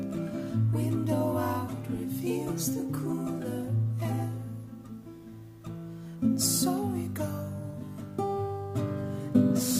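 From 7.63 s to the end, crude rate conversion, likely 44.1 to 48 kHz by repeating nearest samples, adds an inharmonic fizz roughly 25 dB down. On a spectrogram it shows as stray mirrored tone lines.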